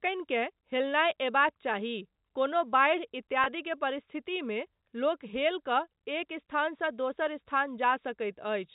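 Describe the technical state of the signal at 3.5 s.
Packet loss with pitch repetition runs from 3.44 to 3.46 s, which fits a single lost 20 ms packet. The receiver bridged the gap by repeating the last pitch period, giving a briefly held, buzzy tone. The waveform shows identical repeating cycles, and the spectrogram shows flat, frozen harmonics below the 4 kHz G.711 ceiling.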